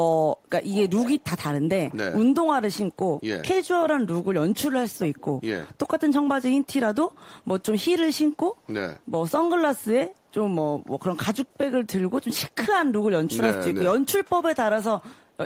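Right at the start, from 0.7 to 1.24 s, there's an echo leak: a copy of the speech comes back about 406 ms late and only about 15 dB down, likely because the far end's echo canceller didn't fully remove its loudspeaker pickup. Then at 4.92 to 5.3 s the speech drops by up to about 25 dB for roughly 0.4 s. That's speech suppressed in double talk, likely the canceller ducking everything while both sides talked. The echo leak comes back as faint 406 ms scraps at 7.11 s (about 30 dB down) and at 8.99, 10.15, 11.46 and 15.21 s (around 40 dB down).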